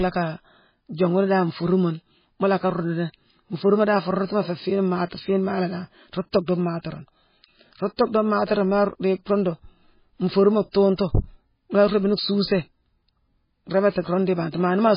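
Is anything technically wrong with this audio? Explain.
Yes. Throughout the speech, the sound is dull and watery, with nothing above 5 kHz and a swirling texture. This is likely heavy MP3 compression, fitting a bitrate near 16 kbps: starved of bits, the encoder cuts the treble and zeroes weak frequency lines, which flicker between frames.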